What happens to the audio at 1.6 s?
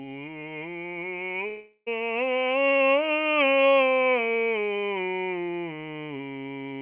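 At 1.6 s the music breaks up in what is likely a long network dropout, from 1.48 to 1.88 s. About 0.38 s of audio never arrived. The receiver stretched the last sound into a fading buzz, then left a short silence of about 70 ms before the music resumed without the lost part. On a waveform the envelope decays to flat, and a spectrogram shows smeared, repetitive bands below 4 kHz giving way to a blank gap.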